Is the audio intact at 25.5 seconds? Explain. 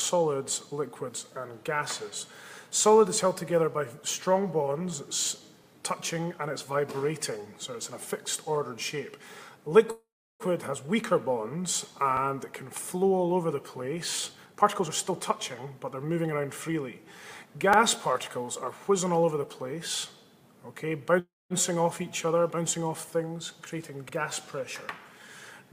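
Yes, the audio at 25.5 seconds is intact, with no fault present at that moment.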